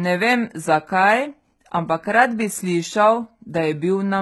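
Throughout the speech, the treble sounds gritty and metallic, and s sounds come out lispy. This is likely HE-AAC compression at a very low bitrate, near 16 kbps. The upper band is rebuilt from copied lower bands, so its harmonics fail to align.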